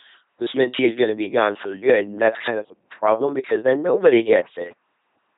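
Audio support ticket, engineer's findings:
LPC-10 vocoder, throughout the speech. Buzzy, mechanical robot tone; each frame is rendered as either a pulse-train buzz or noise through a ten-pole filter. Heavy damage, consistent with roughly 2.4 kbit/s. Nothing above 3.8 kHz.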